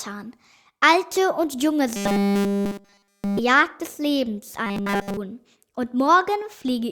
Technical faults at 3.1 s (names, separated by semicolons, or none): robotic sound from repeated short buffers